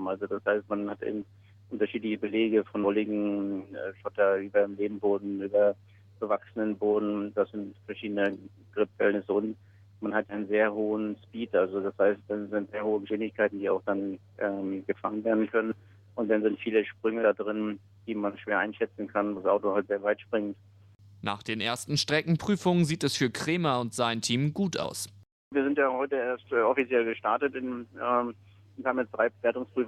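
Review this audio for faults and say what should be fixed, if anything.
Jumps where the sound skips forward at 1.21, 2.83–2.86, 10.29–10.36, 13.09–13.11, 15.71–15.76, 17.23–17.26, 19.37–19.39 and 24.83 s are compressed frames skipped. Each jump loses roughly 40 to 100 ms, consistent with whole 20 ms frames being dropped. The frames were missing from the file or rejected by the decoder as damaged. To prevent it, transfer and store the file with integrity checks, and re-encode from an intact source so every frame reaches the decoder undamaged.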